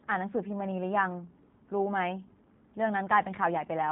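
Throughout, the speech passes through a G.729 codec rebuilding each 10 ms frame from a filter model and a few pulses, likely around 8 kbit/s: nothing above 3.8 kHz survives, leaving it rough and synthetic.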